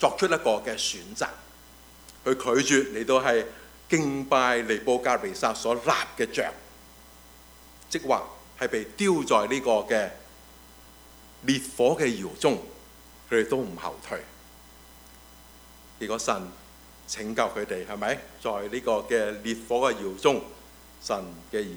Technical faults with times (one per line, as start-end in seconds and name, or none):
none